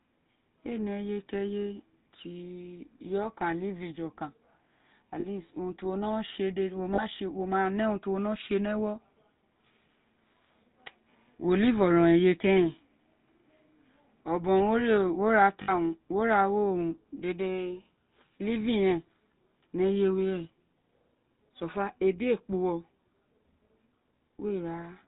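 From start to finish, the speech carries the sound of the GSM full-rate codec. The damage is plainly audible. The codec models the vocal tract and drives it with evenly spaced pulses, keeping only a third of the excitation samples. That coarse excitation gives the voice a buzzy, gravelly roughness. Nothing above 4 kHz survives, so the top end is dull. The character fits the 13 kbps full-rate coder.

At 5.2 to 5.25 s there are lost GSM frames. The decoder fills the gap by repeating the last good frame. The result is a brief, rough, metallic ring in place of the missing sound. The gap of about 40 ms fits two frames. The same happens at 6.94 to 7.04 s, just after "no tse dede wo". A longer loss follows at 15.62 to 15.72 s. Its held ring runs about 60 ms.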